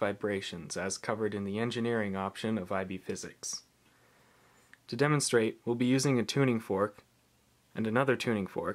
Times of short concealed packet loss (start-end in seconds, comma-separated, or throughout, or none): none